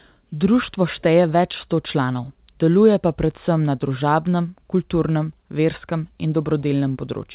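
Nothing goes wrong anywhere in the speech here; it simply comes across as a regular call over G.711 mu-law at 64 kbps, with the usual telephone-band ceiling leaving nothing above 4 kHz.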